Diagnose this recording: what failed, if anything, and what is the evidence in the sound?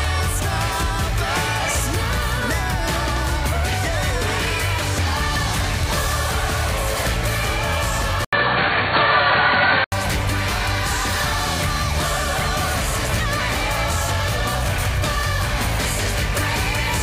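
The input most likely switched to a poorer device at the driver level, with capture rerouted to another microphone or a headset call profile and then back. At 8.25 s an 80 ms silence opens the change. Until 9.92 s nothing passes above 4.5 kHz, so the sound turns dull and boxy, the level shifts by about 5 dB, and a new, faint background noise well under the signal appears. All of it clears when the original path returns.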